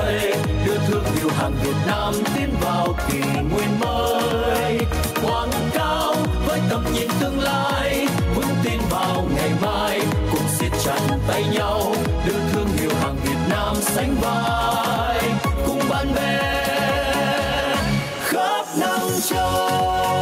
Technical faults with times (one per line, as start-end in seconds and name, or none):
0.00-20.22 gain pumping